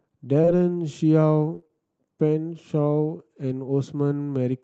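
Short concealed packet loss at 0.41 s and again at 0.45 s: two consecutive 20 ms chunks of speech arrived too late to decode. The receiver bridged each by extending the preceding sound and fading back in, leaving a brief smear in the speech near 0.41 to 0.49 s.

Repeated packet loss (robotic sound) runs from 1.55 to 1.71 s. Four separate gaps, the longest 29 ms, were each patched with extrapolated sound, so about half that stretch is synthetic. The result is choppy speech with pieces missing, all carried through a call path band-limited at 8 kHz.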